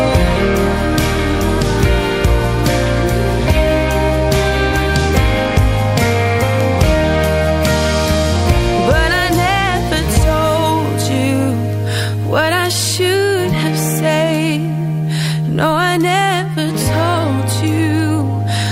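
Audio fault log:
0.33–18.57 s, word clock ticks: the receiving device runs on its own clock instead of locking to the digital link, and the two clocks drift apart by something in the region of 40 ppm. Each time they slip past one another, a single sample is dropped or repeated and the samples around it are misread, which breaks the waveform into a short, sharp tick. These slips recur roughly every half second, about thirty in all, so the ticks keep a steady pace.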